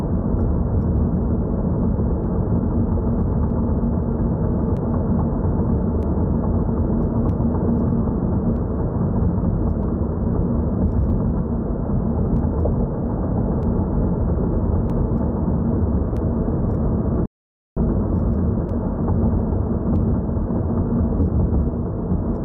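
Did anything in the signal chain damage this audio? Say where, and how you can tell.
Yes. The damage is at the driver or buffer stage. A regular click repeats every 1.26 s, from 0.98 s to 21.22 s, about fifteen times in all. Such even spacing points to clock drift buffer slips as the likely cause. Two devices tick at slightly different rates, here a few hundred parts per million apart. The buffer between them slowly drifts until a small block of samples is dropped or repeated, leaving a tick.

There is also a playback stall at the playback stage. The sound cuts out at 17.26 s and returns at 17.77 s, a gap of about 0.51 s. The silence falls mid-flow, and it is not a fade. The likely cause is a player that ran short of data or had its thread blocked. Output stopped until the buffer refilled, and then the audio carried on.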